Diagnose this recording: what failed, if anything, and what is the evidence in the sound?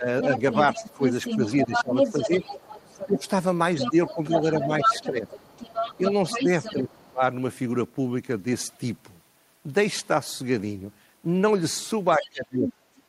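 The talker's speech sinks in pieces between 0.0 and 7.22 s, around two seconds in all, by up to about 15 dB, and drops by about 30 dB from 12.18 s to the end. This is speech suppressed in double talk, likely in the call processing's echo canceller, which attenuated both voices when both sides spoke at once.

A second voice runs under the talker from 0.22 to 6.74 s at about 5 dB below the speech, and again from 12.21 to 13.02 s at about 10 dB below. This is the other side's voice leaking through, likely because echo cancellation left the loudspeaker's playback in the microphone signal.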